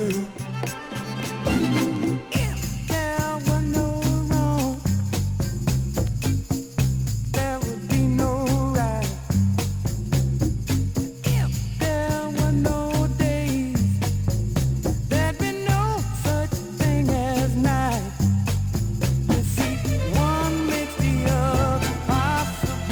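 No technical faults can be heard anywhere in this recording.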